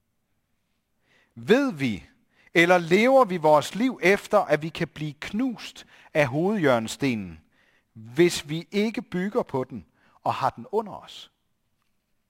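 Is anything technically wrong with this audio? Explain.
Yes. Throughout the speech, there is crude rate conversion: the audio was taken from 48 kHz to 44.1 kHz by simply picking the nearest sample, dropping samples at a regular pattern set by the two rates, with no filtering. Those periodic skips create shifted, inharmonic copies of the speech, around 30 dB below it, heard as a gritty, inharmonic fizz that rides on louder and brighter sounds.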